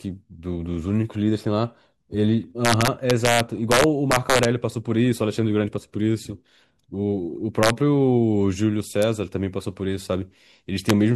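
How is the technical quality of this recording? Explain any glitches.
The recording is marred by integer overflow, heard four times: from 2.65 to 4.45 s with peaks about 3 dB over the limit, 7.63 to 7.70 s at about 2 dB over, and brief cracks at 9.02 s and 10.90 s. The gain stage adds past the largest integer value without limiting, so peaks wrap around to the opposite sign. The loudest parts of the speech become violent cracks far harsher than ordinary clipping.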